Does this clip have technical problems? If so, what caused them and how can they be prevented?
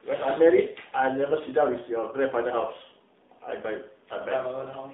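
Yes: AMR narrowband mobile codec damage throughout, buzzy and synthetic, fitting roughly 7.4 kbps; the spectrogram shows a band from 200 Hz to 3.7 kHz only. Prevent it by using a wideband or higher-bitrate path.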